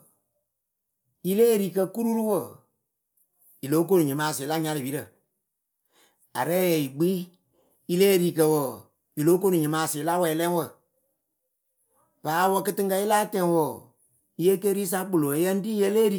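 No technical faults can be heard anywhere in the speech; the signal stays continuous and steady throughout.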